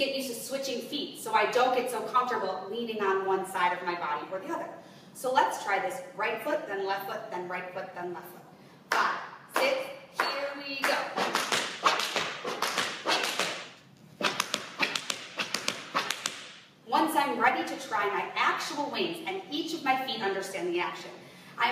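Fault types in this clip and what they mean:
No technical faults can be heard anywhere in the audio: the signal stays continuous and stable throughout, with no interruptions or disturbances that would point to a problem in capture, processing or playback.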